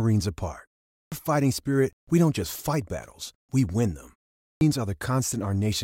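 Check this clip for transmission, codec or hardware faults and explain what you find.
Two faults of the same kind appear, both a clipped start after a pause.

Clipped start after a pause, 0.91 to 1.12 s (before "fighting spirit we don't") and 4.39 to 4.61 s (after "battles we win them"): after pauses of about 0.3 s, the sleeping output device needs time to wake, swallowing about 0.21 s and 0.22 s of onset. Speech bursts in abruptly, first sounds missing. Waveform and spectrogram show flat silence ending in a hard vertical edge with no rising attack.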